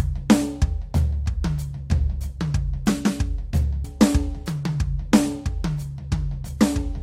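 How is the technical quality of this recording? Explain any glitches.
The recording has one glitch, at 3.83 s in the music. The sound jumps abruptly forward with a small blip, skipping a stretch of the piece so that the passage after the jump does not follow on from the one before it. The likely cause is a stream segment skipped: one chunk of the segmented stream failed to load in time, and the player went straight on to the next chunk instead of waiting, dropping that portion of the programme.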